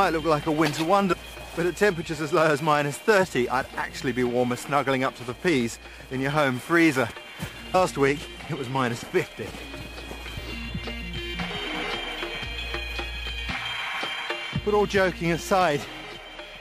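At 1.12 to 1.14 s and again at 7.73 s, brief glitches mark damaged data in a compressed stream: corrupted bytes make the decoder misread frames and hunt for the next header.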